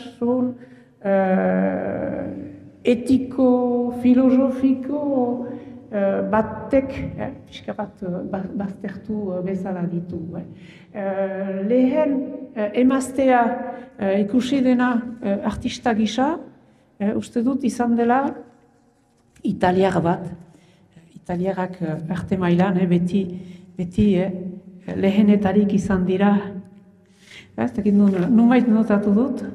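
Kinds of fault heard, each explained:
Nothing stood out on listening; no faults of any kind could be heard.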